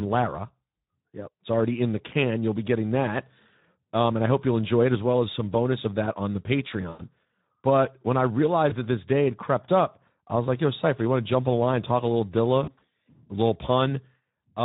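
A speech clip coded throughout with the Speex codec. Its hoarse, noisy texture and noise-like top band fit a low setting around 11 kbps. Too few bits reach the excitation, so detail turns rough. VoIP packet loss concealed by the speech codec breaks in three times. At 6.89 to 7.05 s, after "of that on the", about 100 ms is lost. At 8.69 to 8.75 s, between "when I" and "that this day had", about 20 ms goes. At 12.63 to 12.84 s, gaps are scattered, the longest about 60 ms. Each time, the decoder stretches its last sound and lowers its gain frame by frame.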